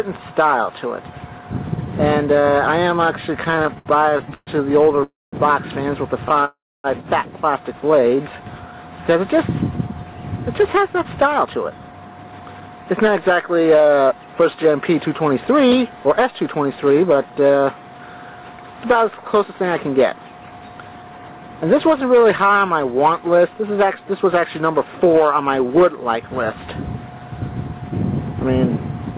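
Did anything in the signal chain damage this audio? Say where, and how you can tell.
Yes, at the network and jitter-buffer stage of what sounds like a G.711 mu-law call path, band-limited to 4 kHz. From 3.44 to 6.45 s there are repeated stalls (stutter): 21 short gaps, the longest 128 ms, where the last sound is stretched to cover late packets. Concealment fills about 14% of that span, so it drags without losing content.

There are two call audio freezes. At 5.04 to 5.36 s the sound is held and decays into about 190 ms of silence. At 6.45 to 6.87 s about 270 ms goes silent. Each time the audio resumes where it stopped, which points to packets likely held up in the network until the jitter buffer ran dry, inserting 289 ms and 392 ms of delay.

A jitter buffer slow-down occurs at 8.00 to 8.38 s and again at 16.94 to 17.59 s. Playback drops to 88% and 89% speed with unchanged pitch and drawn-out sounds. 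The receiver repeated pitch periods, adding 54 ms and 82 ms to rebuild its reserve.

A jitter buffer speed-up runs at 9.93 to 14.58 s at 109% speed, removing roughly 400 ms, and at 19.44 to 21.20 s at 110%, removing about 200 ms. Both have pitch intact but sound hurried. A faint one at 25.74 to 28.83 s, near 101%, trims a few tens of milliseconds.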